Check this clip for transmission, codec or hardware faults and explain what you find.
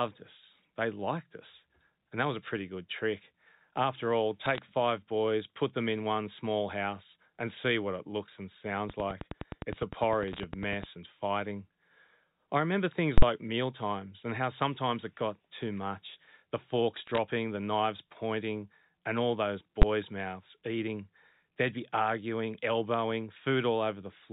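The speech has three kinds of fault: line bit errors, a click train, and full-scale invalid-number blocks.

Bit errors on a digital phone line occur at 4.44–4.58 s, 10.28–10.40 s and 16.97–17.18 s. Flipped bits corrupt single A-law samples, and the hits on sign or high bits give short bursts of sharp crackle.

A train of clicks runs from 8.90 to 10.85 s, between "what it looks and" and "and fighting". About twenty evenly spaced pulses, 9.8 per second, tick roughly 10 dB above the speech, likely from electrical interference or a struggling interface.

Invalid numbers at full scale hit at 13.18–13.22 s, after "I remember things", and at 19.82 s, after "pointing and all those". A calculation produced infinite values that pinned whole blocks to full scale. The 46 ms block, which fits 2048 samples, gives a loud pop at each end with silence between. The 12 ms block, fitting 512 samples, is a single bang.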